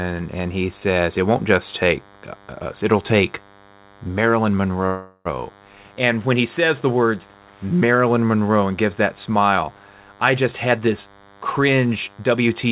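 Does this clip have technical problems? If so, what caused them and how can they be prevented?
Yes. A DECT cordless phone buzz runs through the whole clip: a thin, steady 100 Hz tone with many harmonics, roughly 30 dB below the speech. It comes from a nearby DECT handset or base transmitting a radio burst every 10 ms, which the audio circuitry rectifies into sound. Keeping DECT equipment well away from the microphone, interface and cables, and using shielded, properly grounded connections, prevents it.

A call audio freeze occurs from 4.86 to 5.27 s. The last sound is stretched into a fading buzz or hiss for about 0.39 s, and then the speech resumes where it stopped, with nothing lost. The likely cause is delayed packets emptying the jitter buffer, which adds that 0.39 s of delay. A more stable network path, with traffic prioritised for the call, prevents it.

A jitter buffer speed-up runs from 10.45 s to the end. 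The speech plays at about 112% speed with unchanged pitch and sounds hurried. The receiver cuts out short pitch-period segments, roughly 0.3 s in total, to reduce the delay built up earlier. Avoiding the delay build-up, or setting the buffer to shrink more slowly, prevents it.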